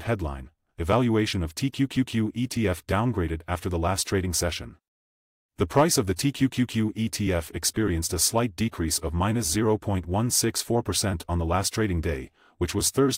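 No technical faults can be heard anywhere in this clip.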